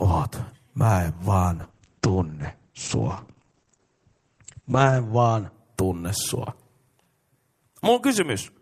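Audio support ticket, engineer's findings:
Call bitrate drop, 1.62–5.59 s, after "en vaan", recovers by "tunne sua". Encoder rate falls from 48 to 11 kbps, bottoming out for 3.4 s; band limit drops from 20 to 8 kHz. Muffled, watery, continuous, no gaps, so not packet loss.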